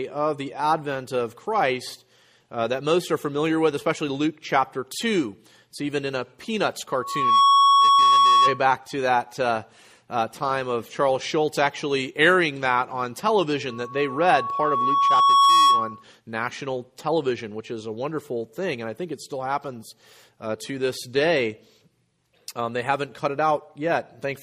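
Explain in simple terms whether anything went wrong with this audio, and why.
Two bursts of loudspeaker feedback squeal occur, from 6.88 to 8.64 s and from 13.70 to 16.03 s. A microphone is picking up its own loudspeaker, and one pitch, around 1.1 kHz, keeps looping round and growing until it rings out well above the rest of the sound. A steady hum or interference whine stays level. This one swells, quickly the first time (about half a second), and slowly over about two seconds the second time.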